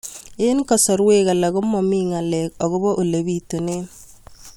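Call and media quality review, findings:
No audible faults found on review of the speech recording; nothing to action.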